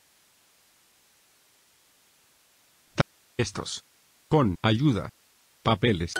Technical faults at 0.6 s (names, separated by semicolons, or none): none